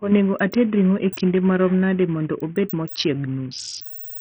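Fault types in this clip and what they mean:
Bluetooth SBC compression: the speech sounds gritty and dull throughout, with treble flickering out, likely from a low bit pool near 48 kbps starving the upper sub-bands.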